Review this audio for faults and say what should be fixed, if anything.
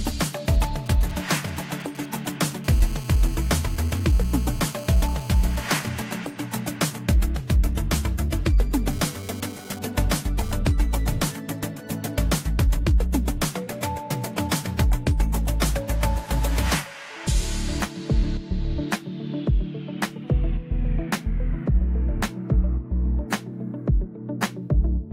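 A 2G phone near the recording chain sent short groups of signalling bursts from 0.54 to 2.53 s, and the audio circuitry rectified them. These GSM signalling bursts come through as a galloping dit-dit-dit of brief 217 Hz buzzes, roughly 20 dB below the wanted signal.

A 2G phone then transmitted in steady bursts during a call from 2.64 to 5.89 s, and in data bursts from 8.91 to 10.55 s. Each time the circuit demodulated the 217 Hz pulse train into a GSM phone buzz, a hard, raspy tone rich in harmonics at about 21 dB below the signal. It is steady in the first stretch and comes and goes in the second.

To prevent this, keep mobile phones well away from microphones, cables and preamps, or switch them to airplane mode, and use shielded balanced cabling with RF-filtered inputs.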